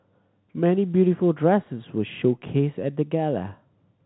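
No technical faults can be heard in this speech clip. The G.711 telephone coding is working normally, so the sound is confined below 4 kHz with at most a faint quantisation hiss that rises and falls with the level.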